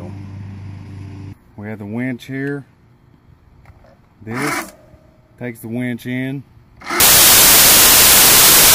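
Samples built from the wrong bytes take over at 7.0 s and last to the end of the clip. From that point the reader assembles each sample from misplaced bytes, whether shifted by one, swapped in order or misaligned. The rapidly fluctuating low-order bits end up carrying the weight of each value. The result is a sudden wall of loud, harsh broadband noise replacing the sound, close to white on loud passages.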